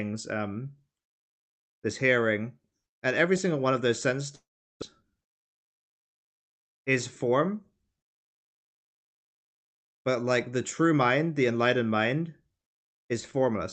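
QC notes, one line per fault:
4.35–4.84 s, long network dropout: the signal stops and the last sound is stretched into a buzzy, fading tail, then a stretch of near-silence of about 390 ms. About 400 ms of the original audio never returns, so the sound resumes further on with a jump. When it resumes, the timing has shifted by roughly 50 ms. This is likely packet loss on the call path, with the receiver's concealment filling the gap until it gives up.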